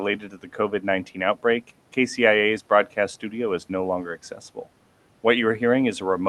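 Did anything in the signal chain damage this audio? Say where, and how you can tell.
Yes. Between 0.2 and 0.54 s the noise suppressor in call processing cut speech, pulling quiet parts down by up to about 8 dB, around 150 ms in all. Unlike packet loss, nothing drops out or glitches; the soft edges just sink toward the background.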